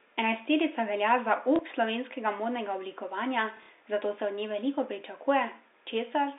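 At 1.56 s and across 3.57 to 3.81 s, packet loss with the last packet repeated: lost 30 ms chunks were replayed, so runs buzz near 33 Hz. Spectrograms show copied blocks.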